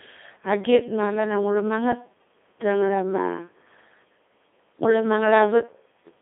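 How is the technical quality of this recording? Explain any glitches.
The technical quality is poor. The whole recording has passed through a Codec 2 vocoder, and the damage is heavy from start to finish. The band runs only from about 250 Hz to 3.6 kHz. Codec 2 does not keep the waveform. It sends only pitch, voicing, energy and a rough spectral envelope. The decoder then rebuilds the voice from sine waves. The result is robotic and buzzy speech. The thinness and coarseness fit a very low rate near 2.4 kbit/s.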